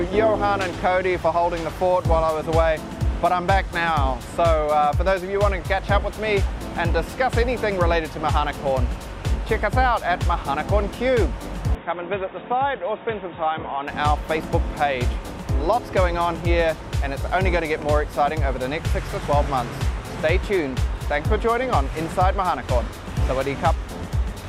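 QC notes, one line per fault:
11.75–13.88 s, input switched to a poorer device: audio goes dull and slightly quieter, cut above 3.8 kHz, with faint new noise, likely from a narrower-band microphone.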